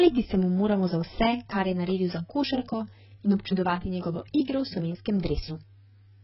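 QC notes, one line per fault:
Throughout, AAC compression: nothing reaches above 5.6 kHz, and the speech sounds dull and smeared, with a warbling, fizzy texture on sustained sounds and sibilants. This is likely heavy AAC-LC coding at a very low rate, and the damage points to something around 12 kbps. The coder drops high bands and coarsely quantises the rest, leaving holes that shift from frame to frame. A plain low-pass filter would also remove the top but leave the remaining band clean.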